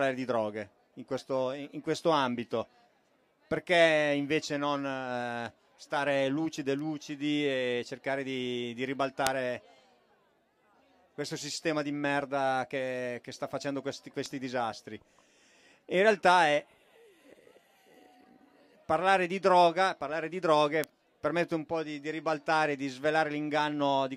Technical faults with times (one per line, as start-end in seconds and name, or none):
6.79 bit error spike
9.27 bit error spike
14.26 bit error spike
20.84 bit error spike